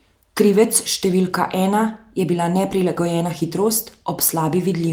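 No technical faults can be heard anywhere in the recording; the speech signal comes through intact and undisturbed from beginning to end.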